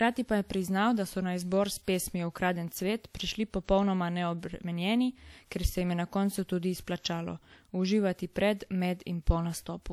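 A speech recording, and across its full length it carries the marks of low-bitrate audio saved at a high bitrate: the content is likely a low-bitrate WMA encode, around 64 kbit/s, later re-encoded as a roughly 251 kbit/s MP3. The generous second bitrate restores nothing the first pass discarded, so the earlier coding artefacts remain audible. On a spectrogram, energy stops sharply at about 20.1 kHz with nothing above it.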